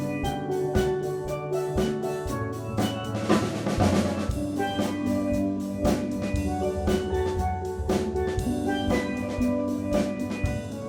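No technical faults can be heard anywhere in the recording.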